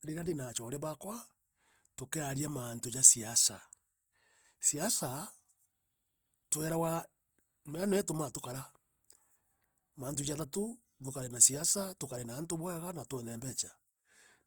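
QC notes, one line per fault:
Throughout, Opus compression: the speech carries a plainly audible rough, grainy texture, with tonal parts of the sound turning noisy. The cause is likely Opus in its music (CELT) mode at a bitrate around 24 kbps, where the encoder holds each band's energy but fills starved bands with folded or noise-like content. Full bandwidth remains up to about 20.1 kHz, and there are few spectral holes, so it swirls less than MP3.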